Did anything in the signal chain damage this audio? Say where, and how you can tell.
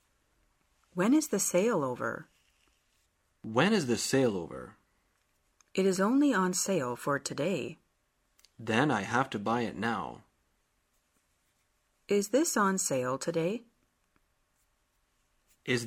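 No, nothing in the signal chain has audibly damaged this audio. No stage from capture to playback leaves a mark on the recording at any point.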